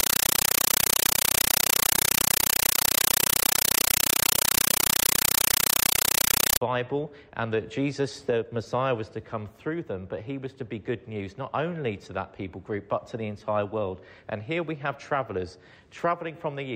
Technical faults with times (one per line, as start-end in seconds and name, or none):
0.00-6.61 compressed stream played as audio